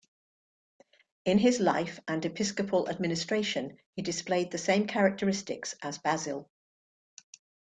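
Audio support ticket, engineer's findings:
No faults found in this speech recording. No dropouts, clicks, distortion or level problems heard anywhere in the clip.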